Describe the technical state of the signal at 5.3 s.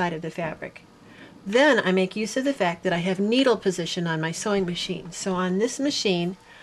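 At 5.3 s the signal is intact, with no dropout, distortion, glitch or other fault to be heard at that point.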